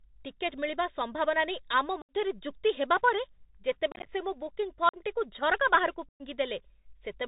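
Throughout the clip the speech carries the sound of a Bluetooth CVSD headset codec, and the damage is plainly audible. The band stops at 4 kHz, so the speech sounds narrow and telephone-like. The one-bit delta coding, consistent with a 64 kbps link, cannot track fast loud high content. Sibilants turn scratchy and a granular hiss sits beneath the speech.

Unconcealed Bluetooth headset packet loss then cuts holes in the signal four times. At 2.02 to 2.14 s about 71 ms of audio is missing, which suggests roughly twenty lost packets. From 3.92 to 4.10 s the losses total about 98 ms scattered over 150 ms, with the longest gap 30 ms. At 4.89 to 4.97 s about 45 ms drops out. At 6.09 to 6.22 s about 113 ms is lost. Nothing fills these gaps, so the edges are abrupt. The scattered stretch near 4 s sounds chopped and crackly.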